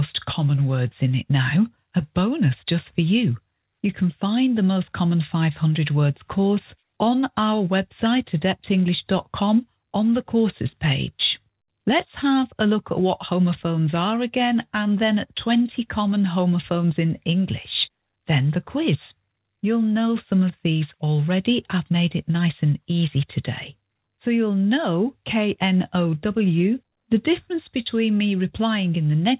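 Nothing stood out on listening, with the audio carrying the narrow band of a telephone-style call path that stops at about 4 kHz, as G.711 A-law does.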